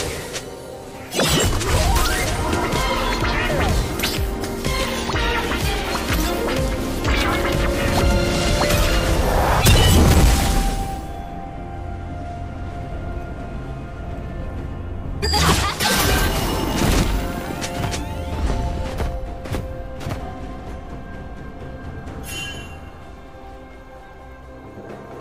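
From 7.97 to 10.57 s, loud peaks turn harsh and fuzzy: hard clipping, with the signal driven about 7 dB past what a stage can pass, flattening peak tops.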